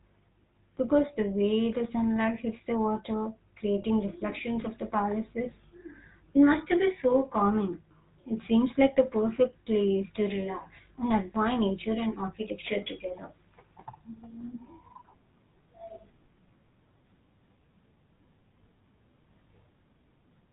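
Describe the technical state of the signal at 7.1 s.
A GSM frame was lost from 7.12 to 7.15 s, right after "it must be". The decoder filled the gap by reusing the last good frame's settings. The result is a brief rough, metallic ring, which fits a single 20 ms frame.

Underneath, the GSM full-rate codec at 13 kbps models the vocal tract and drives it with sparse, regularly spaced pulses, passing nothing above 4 kHz. That gives the speech a plainly audible buzzy, gravelly roughness and a dull, band-limited top.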